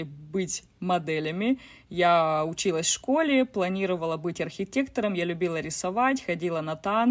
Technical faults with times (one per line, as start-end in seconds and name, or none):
none